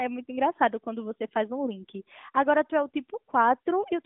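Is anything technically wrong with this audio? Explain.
No, nothing is wrong: this is speech carried over an AMR narrowband mobile link, audible as a 200 Hz to 3.6 kHz telephone band with nothing above 3.8 kHz and only light coding texture, which fits the 12.2 kbps mode working as designed.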